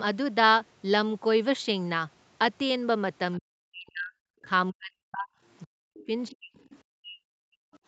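From 3.39 to 5.3 s the talker keeps dropping out, gaps of about 40 dB at the worst, and it happens again from 5.65 to 6.59 s and 6.9 to 7.61 s. That's speech suppressed in double talk, likely the echo canceller confusing its own talker with loudspeaker echo and ducking both. Overlapping the second dip, from 5.97 to 6.78 s, the other side's voice leaks through faintly, about 25 dB under the speech, with one more brief scrap at 7.73 to 7.78 s, about 35 dB down. That's likely echo the canceller didn't fully remove from the microphone.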